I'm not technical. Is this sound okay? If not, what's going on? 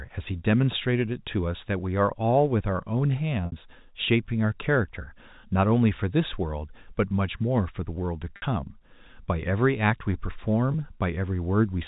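No. Packet loss with pitch repetition happens three times: at 3.46 s and 8.36 s, each gap about 60 ms long, and at 10.72 s, a shorter gap of about 20 ms. Bits of the speech went missing in transit, so the phone repeated the last tiny slice of voice to fill each hole. You hear that as a brief, slightly buzzy held sound, over the telephone-quality sound that the phone line's coding gives.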